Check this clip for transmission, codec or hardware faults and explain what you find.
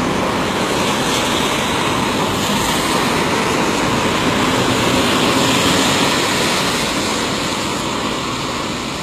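There's one codec fault here, and it runs the whole length of the clip. The top end sounds bright but fake: high-frequency detail comes across gritty and metallic, and the treble doesn't quite belong to what's underneath it. That's most likely HE-AAC compression at a very low bitrate, somewhere around 20 kbps. Only the lower band is really coded, and the treble is rebuilt by copying lower bands upward, so harmonics don't line up across the join and the damage is plainly audible.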